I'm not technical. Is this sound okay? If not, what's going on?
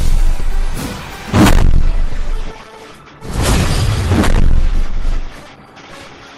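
No. From 1.6 seconds to the end, the sound suddenly gets duller, with nothing left above 12 kHz. This is an adaptive stream at a lower bitrate. A slower connection made the player switch to a lower-quality copy. There's no gap, just the drop.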